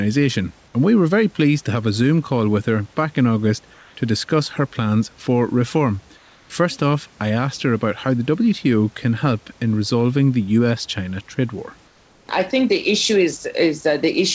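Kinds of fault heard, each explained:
Comfort noise in place of the background: in two pauses, 3.74 to 3.95 s before "to discuss her plans" and 6.17 to 6.50 s after "her plans for reform", the room's textured background gives way to a flat synthetic hiss, about 1 to 3 dB quieter, likely from discontinuous transmission. Unlike a dropout, the gap never falls silent.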